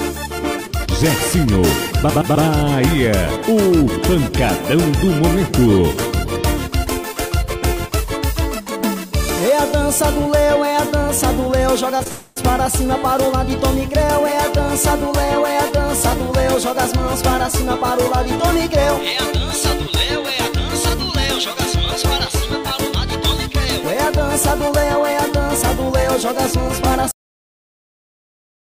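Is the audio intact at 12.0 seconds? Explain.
No. Short concealed packet loss hits at 11.97–12.01 s and again at 12.03–12.07 s. Each time about 20 ms of audio failed to arrive, and the receiver bridged the hole by extending the preceding sound before blending back, leaving a brief smear or wobble.

A long network dropout follows immediately, from 12.07 to 12.38 s. Roughly 0.28 s of audio is missing, replaced for its whole length by a continuation of the last sound that decays into a fading buzz or hiss. The likely cause is a stretch where no packets reached the receiver.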